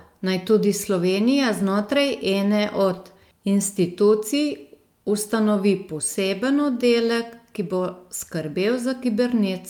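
No technical faults can be heard anywhere in the recording.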